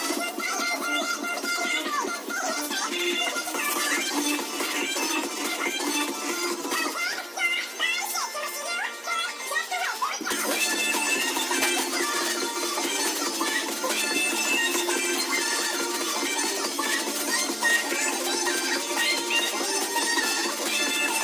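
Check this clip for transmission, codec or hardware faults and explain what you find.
No transmission, codec or hardware faults are audible.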